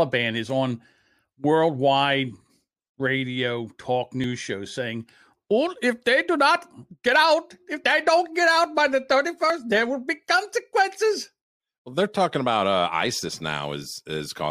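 At 4.24 s and again at 9.5 s the speech jumps forward, as if a sliver of sound were snipped out and the two edges butted together, with no gap of silence between them. Each skip loses roughly a fiftieth of a second. This is likely a dropped buffer (overrun): the recording software fell behind, the hardware overwrote a block of samples before it was collected, and the audio on either side was joined directly.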